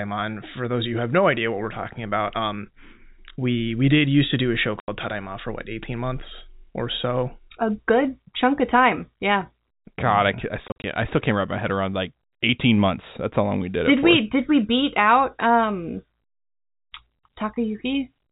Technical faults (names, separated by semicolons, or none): packet loss filled with silence